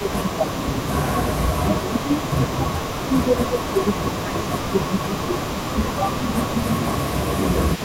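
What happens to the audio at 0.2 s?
At 0.2 s the speech is being pushed down hard, dropping by something like 20 dB during the opening half second (0 to 0.51 s). That's speech suppressed in double talk: with both sides talking at once, the echo canceller likely couldn't separate the talker from the loudspeaker echo and turned everything down.

On top of that there's an echo leak running through the whole clip. A faint copy of the speech comes back 262 ms late, around 20 dB below the direct sound, most likely because the loudspeaker side's canceller let some of its loudspeaker pickup slip through and sent it back.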